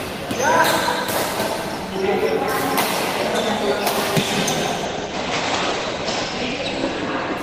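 From 4.87 s to the end the audio turns muffled and rough, losing everything above 8 kHz, where it had reached 20 kHz before. This is a call bitrate drop: the encoder was pushed to far fewer bits, consistent with a fall from around 32 to 13 kbps, and it never recovers before the clip ends.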